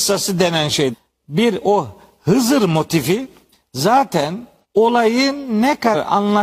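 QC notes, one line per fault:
0.89, 3.49, 4.60 and 5.90 s: compressed frames skipped. At each point the speech jumps forward, losing roughly 0.4, 0.5, 0.4 and 0.2 s of audio. That matches runs of several whole frames, each about 46.4 ms long, going missing or being rejected by the decoder. Each gap is heard as a short glitch lasting 30 to 66 ms.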